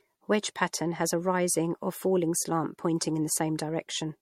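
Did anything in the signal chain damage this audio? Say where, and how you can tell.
Yes, at the codec stage, across the whole clip. The speech sounds swirly, smeared and hollow, more than a single lossy pass would explain. Consonant attacks blur, and nothing remains above 16.4 kHz. This is generation loss, likely from repeated MP3 encoding, about four passes, at a rate that fits 64 kbit/s. Each decode and re-encode quantises again on a shifted frame grid. The noise and spectral holes stack up with every pass.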